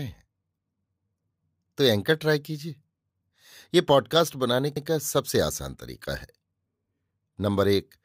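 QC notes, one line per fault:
4.77–4.87 s, overlapping chunks: a 100 ms stretch of the speech plays twice at a chunk join, producing a brief stutter with a click at the seam. Each block of roughly 3.0 s begins before the previous one has finished, so the overlapping segment is rendered once at the tail of one chunk and again at the head of the next, and the waveform discontinuity where they butt together causes the click.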